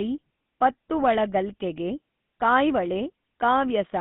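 The speech has been passed through the GSM full-rate codec for its whole length. This coder models the vocal tract as a filter and excites it with a sparse train of regularly spaced pulses rather than the real waveform, and the coarse result fits the 13 kbps full-rate scheme. The band is held between about 150 Hz and 3.6 kHz, so the audio sounds thin and boxy, and the speech carries a plainly audible buzzy, gravelly roughness throughout.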